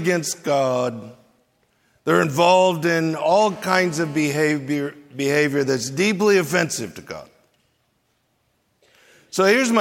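A 2G phone close to the recording chain was transmitting in its call state, and the audio circuitry rectified the radio bursts, producing a GSM phone buzz from 3.44 to 4.25 s. The pulses arrive about 217 times a second, so the result is a hard, raspy buzz at 217 Hz, rich in harmonics and unrelated to the sound itself. It holds steady throughout, sitting about 21 dB below the signal.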